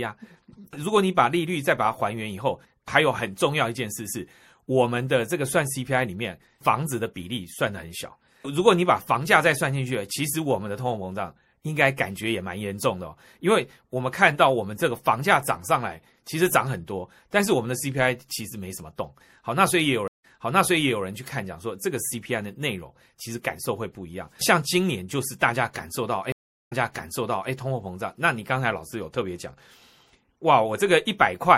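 A speech recording with plainly audible codec damage throughout, most likely from MP3 compression at a low bitrate, in keeping with about 64 kbps. Weak frequency components flicker in and out between frames, giving a watery, swirly texture, metallic chirps on s sounds and smeared consonant attacks. Two stream reconnects follow. At 20.08 s the audio drops to silence for about 157 ms, then resumes roughly 0.81 s earlier than where it broke off, so a short stretch is heard again. The first moment after the restart is muted or fades in as the new decoder settles, and the fault ends at 21.04 s. At 26.32 s the same happens with a longer silence of about 389 ms, again jumping back about 0.81 s, with recovery by 27.52 s. The matching jump-back points to the server resending a buffered burst after each dropped connection.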